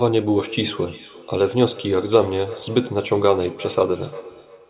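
From 0.38 s to the end, the speech comes back at an interval of roughly a third of a second, peaking about 17 dB below the direct sound. This is feedback echo between two devices: a second device in the room replays the call, and the first microphone picks it up again where no echo canceller can remove it. The fixed spacing tells it apart from room reverberation. Sound above 4 kHz is absent, which fits a telephone-band codec.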